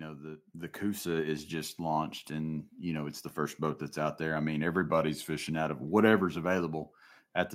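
Automatic gain rising runs from 0.52 to 3.65 s in this speech recording: the gain control judged the input too quiet and lifted it by about 9 dB over roughly three seconds, so the voice and background noise swell upward together. A drift correction step follows from 4.82 to 5.52 s, where playback slows by 5.7% and pitch drops about 101 cents, a semitone flat. This is likely clock-matching software abruptly changing rate to rebalance its buffer.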